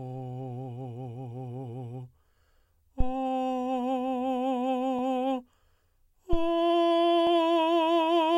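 A music recording carrying two phantom power thumps, at 3.00–3.16 s and 6.33–6.56 s. Each is a deep, low-frequency thud peaking at about −12 and −14 dBFS, decaying in 35 and 51 ms, as a supply step on the live input passes through the coupling capacitors.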